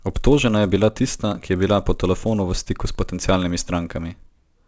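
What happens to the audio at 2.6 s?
At 2.6 s you're hearing the resampler restarted on every block, which runs through the whole clip. It converts each 10 ms block separately, so the edges pick up errors that buzz at 100 Hz under the speech.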